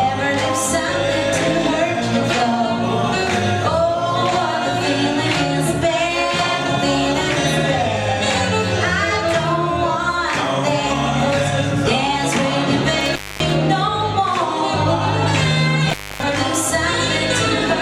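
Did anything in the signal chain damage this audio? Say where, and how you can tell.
Yes, in the analogue wiring: an intermittent contact, where a loose plug or cable briefly lost connection. The audio drops out twice, from 13.01 to 13.55 s and from 15.90 to 16.23 s, with the line fully open for about 244 ms and 266 ms. Each break is bracketed by crackle as the contact scrapes open and closed, and faint hiss remains while the circuit is broken.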